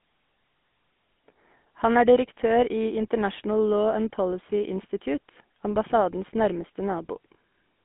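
From start to end, the speech carries GSM full-rate codec damage: band-limited to roughly 200 Hz–3.5 kHz, with a plainly buzzy, gravelly texture from pulse-excited vocal-tract coding.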